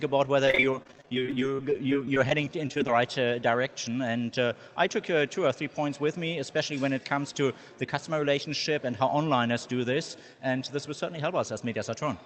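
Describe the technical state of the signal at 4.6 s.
At 4.6 s the audio is inside a jitter buffer speed-up running from 4.59 to 4.89 s. The receiver's buffer had built up surplus audio and drained it by cutting out short pitch-period pieces, about 40 ms in total, so the sound plays at 111% speed and feels briefly hurried. Unlike a resampling speed-up, the pitch stays the same, and unlike packet loss, nothing drops out audibly; the passage simply tightens.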